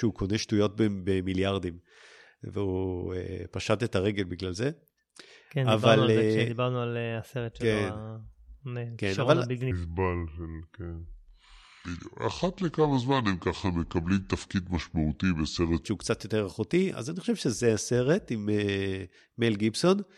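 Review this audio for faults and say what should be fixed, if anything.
From 9.71 to 15.86 s, a section of the speech plays at the wrong speed. It runs at 0.724 times its recorded rate. The speech turns slow and deep, dropping about five semitones. Speed and pitch shift together at both boundaries, so the change is abrupt. The likely cause is an editor or player treating this section with the wrong clock or sample rate. Conform every section to one project sample rate before editing and export.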